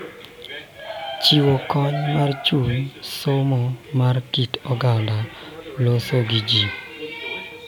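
Listening closely to the speech, nothing stood out as a technical problem at any point.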